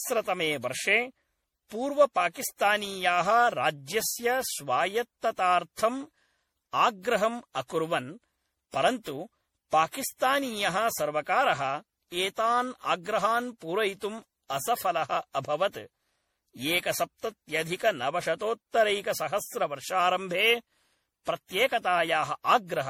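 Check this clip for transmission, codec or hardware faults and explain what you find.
There is a codec fault running through the whole speech clip: generation loss. The sound fits repeated lossy encoding, likely around ten passes through an MP3 codec at about 64 kbit/s. Each re-encode quantises on a shifted frame grid, so noise and spectral gaps build up, leaving the speech swirly, hollow and smeared, with blurred consonant attacks.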